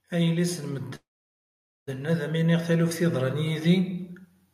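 From 0.1 s to the end, automatic gain rising lifts speech and background noise together, a slow swell rather than the speaker simply talking louder. At 0.95 to 1.89 s a call audio freeze fills about 0.9 s, mostly silence after a brief fading buzz; the speech then resumes where it stopped, so nothing is lost, likely because packets were delayed in transit.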